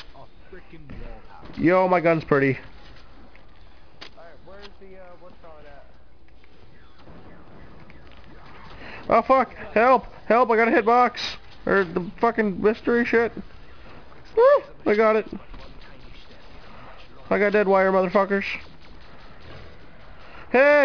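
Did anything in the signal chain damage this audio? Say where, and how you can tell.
Yes. Aliasing is present throughout, introduced at sample-rate conversion: energy runs hard up to 5.5 kHz, which fits a drop from 48 kHz to 11 kHz without an anti-alias filter. Highs fold back as gritty, unrelated tones, roughly 25 dB down. Plain band-limiting would only dull the sound, not add these tones.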